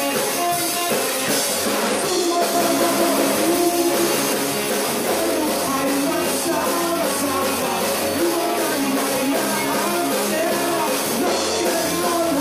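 From 2.55 to 4.33 s there's a doubled audio track: a second full-band copy sits roughly a fifth of a second behind, at about the same level, dry and with no decay, then cuts off abruptly. Likely a second, slower capture path got mixed in.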